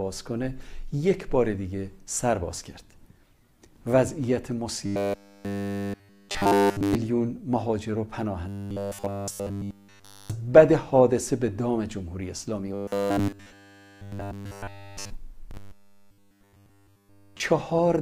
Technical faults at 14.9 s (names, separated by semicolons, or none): robotic sound from repeated short buffers